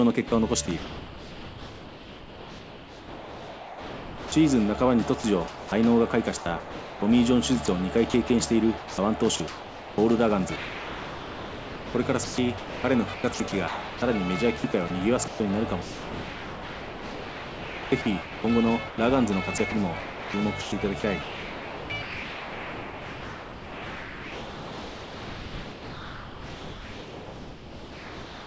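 Sound chopped by the voice detector recurs in seven stretches: 0.28–4.32, 5.20–5.72, 6.38–7.02, 7.66–9.98, 10.56–14.02, 14.58–18.98 s and 19.58 s to the end. Portions of the signal give way to synthetic comfort noise, so the audio turns choppy, likely because the sender's voice detector kept toggling transmission.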